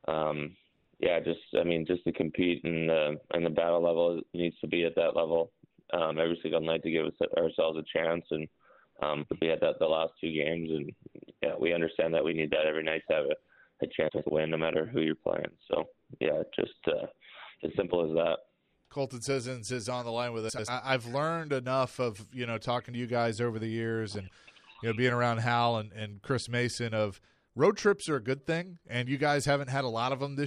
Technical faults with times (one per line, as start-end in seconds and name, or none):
9.23-9.42 frames out of order
14.08-14.27 frames out of order
20.49-20.69 frames out of order